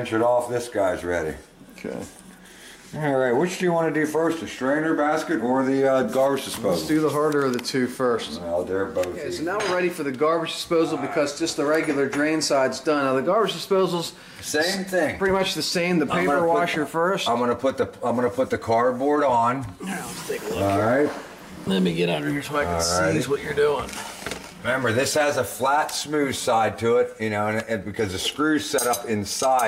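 No technical faults can be heard anywhere in the audio.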